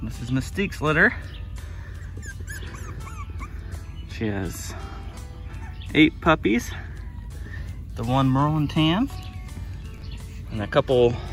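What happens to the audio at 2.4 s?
A brief blip of misplaced, noisy energy cuts through the sound at 2.40 s, lasting under 20 ms and peaking only around -30 dBFS. It comes from a corrupt frame being decoded: flipped bits in a small run of compressed frames, a few at most, were played as if valid, so misread codes and wrong gains scattered energy into the wrong frequencies for the length of that damaged stretch.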